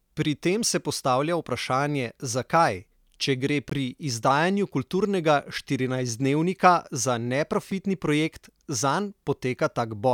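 Gap between stream segments, at 3.70 to 3.72 s and again at 7.71 s: the time stamps of adjacent segments leave a short hole that the player pads with silence, so nothing is lost. The first hole, about 20 ms, cuts in with hard edges between "vprašanje zakaj če gre" and "pri izdajanju kulturnega štirinajstdnevnika". The second is a brief 3 ms dropout after "za", before "projekt zanj". The four-second spacing fits 4 s segments.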